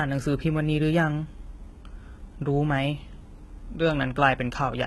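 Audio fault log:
throughout: likely HE-AAC compression. The top stops at 11.8 kHz, yet the treble is bright, metallic and gritty rather than dull, which points to a very low bitrate.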